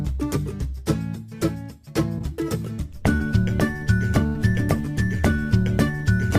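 At 2.18 s and again at 3.17 s, short concealed packet loss leaves brief smears, where gaps of roughly 20 to 30 ms were bridged by extending the preceding sound. At 4.27 s, a burst of packet loss of about 90 ms is filled with a fading continuation before the audio resumes with roughly 70 ms skipped.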